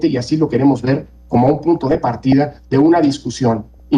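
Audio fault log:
1.49–2.33 s and 3.57–3.80 s, DAB burbling: weak reception left residual bit errors, at a rate of around half a percent, that slipped past error correction into the MP2 audio stream. Corrupted samples put short blips of noise into single sub-bands, and corrupted scale factors make individual sub-bands leap in level for up to a frame, so the audio picks up a burbling texture. The first burst is longer, and the second is shorter.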